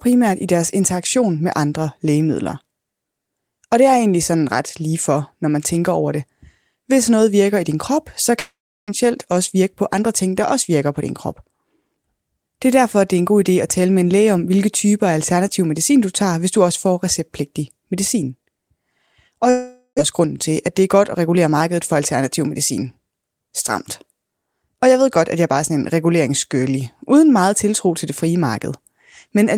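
From 8.39 to 8.90 s the speech smears into a fading buzz, then drops to about 0.34 s of silence before resuming with roughly 0.4 s of speech missing. This is a long network dropout, likely caused by packets that never arrived, with the receiver stretching the last sound until it gave out. The gap also left the playback running about 70 ms late.

From 9.04 to 10.23 s the speech sounds slightly hurried, about 6% fast at unchanged pitch. This is a jitter buffer speed-up: the buffer trims tiny pitch-period slices, repeatedly, to recover that extra delay.

The pattern repeats. From 19.50 to 20.01 s a second long network dropout gives a fading buzz with only a brief silence, about 60 ms, and again roughly 0.4 s of speech lost. From 20.68 to 21.49 s a second jitter buffer speed-up runs about 7% fast, again catching up a small fraction of a second.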